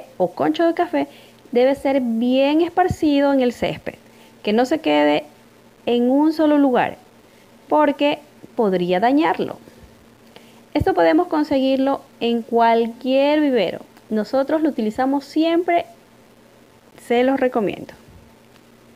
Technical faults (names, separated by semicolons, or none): low bit depth without dither